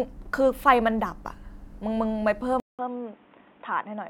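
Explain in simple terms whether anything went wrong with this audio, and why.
At 2.6 s the sound goes silent for about 0.19 s, then returns duller, quieter and noisier until the end, with nothing above 3.8 kHz. That is likely an input switched to a poorer device: unlike a plain filter, level and background noise change too.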